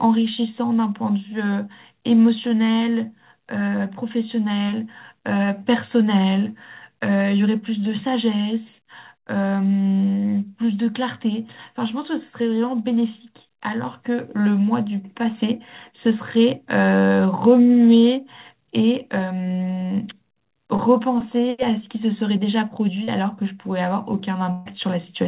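At 23.04 to 23.10 s comes a short concealed packet loss: about 40 ms of speech went missing and was patched by extending the preceding sound, leaving a brief smear rather than an audible gap. At 24.52 to 24.68 s a burst of packet loss removes about 140 ms. Here the concealment stretches much longer, so the last sound is held and fades as a buzz or hiss before speech resumes further along. That longer, decaying hold sets it apart from the first quick blip.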